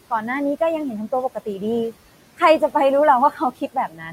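A noise suppressor running across the whole speech recording pulls down the frequency bands it judges to be steady background by about 17 dB, frame by frame. The room noise, which sits about 19 dB under the speech, therefore does not stay constant. It dips away in the gaps and swells back beneath each phrase. These are noise suppressor artifacts. From 3.31 s to the end of the clip, the same processor mistakes part of the speech for noise and attenuates it by as much as about 16 dB. Roughly 400 ms of material within that closing stretch is affected, so softer consonants and word endings come out swallowed and faint rather than cleanly finished. That is speech cut by the noise suppressor, produced by its gain decisions treating low-level speech energy as background.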